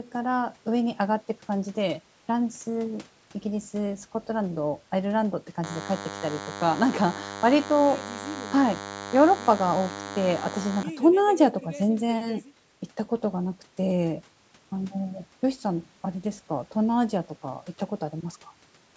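From 5.64 to 10.83 s, DECT cordless phone buzz: a nearby handset's 100 Hz radio bursts get rectified into the audio, giving a thin, harmonic-rich buzz well below the speech.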